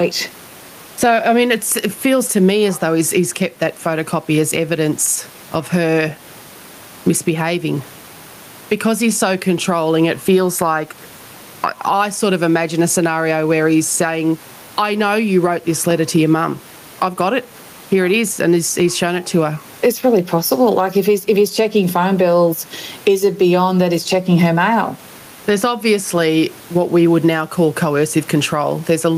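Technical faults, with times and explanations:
Throughout, gain pumping: the room noise sits about 34 dB below the speech, and the level swings by about 15 dB. The likely cause is input gain set far too high, with a fast limiter clamping each loud syllable. On a waveform the peaks look flattened to an even ceiling.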